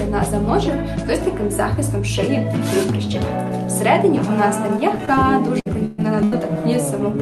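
At 5.05 to 5.09 s and again at 5.15 to 5.24 s there is short concealed packet loss. Each time about 20 ms of the stream reached the decoder too late, and the receiver bridged the hole by extending the preceding sound before blending back. Each one is a brief smear or wobble, and the second also stretches the timing slightly.

Three bursts of packet loss follow, at 5.60 to 5.67 s, 5.85 to 6.00 s and 6.24 to 6.34 s, losing 60, 120 and 80 ms of consecutive audio. The decoder carried the last sound forward while fading it, so each gap becomes a held buzz or dying hiss. The audio then picks up further along, with that stretch gone. Throughout, the Opus call path cuts the top off the audio at 12 kHz.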